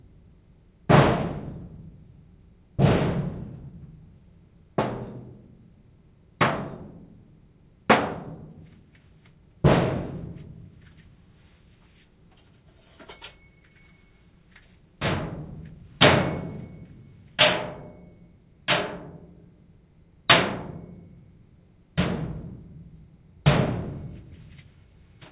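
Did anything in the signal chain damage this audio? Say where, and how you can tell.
No, nothing audible points to damage at any stage of the chain, from capture through to playback of these everyday sounds.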